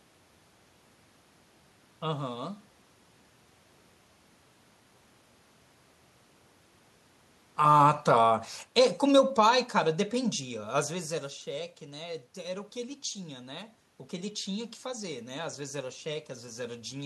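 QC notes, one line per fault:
7.56–10.47 s, automatic gain falling: the speech drops by about 7 dB over three seconds. Room noise sinks with it, so the gain moved.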